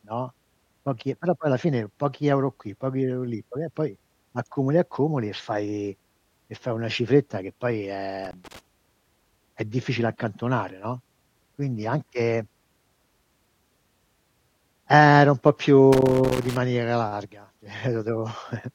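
Speech with loose connector crackle at 8.25–8.59 s and 15.93–16.57 s, where a worn contact chops the signal; waveforms show ragged dropouts and spikes, and spectrograms show broadband vertical streaks.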